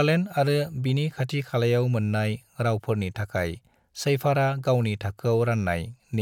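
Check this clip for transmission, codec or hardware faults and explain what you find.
No transmission, codec or hardware faults.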